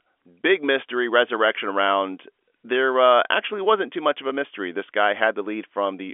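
No faults can be heard in this telephone-band speech.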